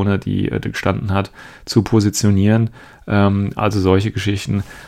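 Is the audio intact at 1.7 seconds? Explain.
Yes, at 1.7 seconds the speech plays through intact, with no dropout, click, distortion or other audible fault at that moment.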